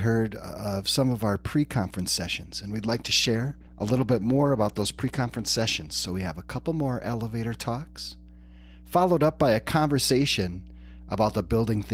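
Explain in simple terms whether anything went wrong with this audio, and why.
A steady low mains hum runs through the whole recording. It sits at 60 Hz, the power-line frequency, and it is fairly loud against the speech. A ground loop or a nearby transformer is leaking electrical noise into the signal.

There is also a call bitrate drop from 2.78 to 6.71 s, starting just after "pre conference sessions and". The call's connection weakened, so the speech was squeezed into far less data. It sounds rougher and more muffled, worst for about 3.1 s, until "more elevator talks".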